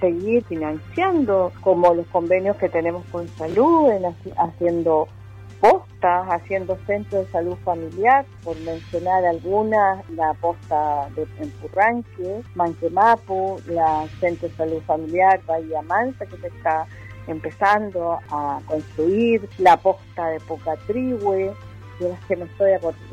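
Chunks out of order at 3.50–3.54 s and 11.70–11.76 s: a 20 ms block plays one, then two, blocks late, so the audio briefly jumbles at the hard joins.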